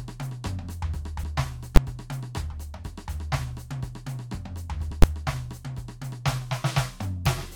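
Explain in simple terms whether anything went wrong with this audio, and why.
The music has two kinds of fault. Compressed frames skipped at 1.23 s and 4.9 s: missing or rejected chunks make the music jump ahead about 50 ms, then 20 ms. Invalid numbers at full scale at 1.76 s and 5.02 s: a calculation broke and pinned the output at one extreme value for about 12 ms, which fits a 512-sample block, giving a loud bang.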